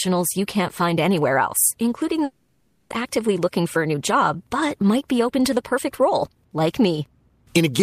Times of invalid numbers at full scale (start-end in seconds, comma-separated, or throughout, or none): none